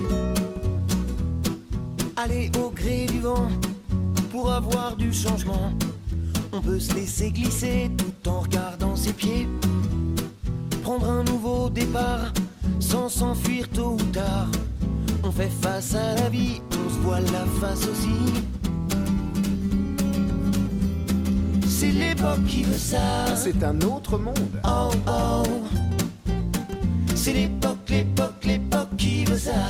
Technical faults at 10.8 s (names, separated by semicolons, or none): none